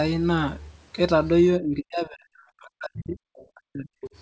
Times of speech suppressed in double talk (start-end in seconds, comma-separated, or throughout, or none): 1.59-2.33, 2.62-3.98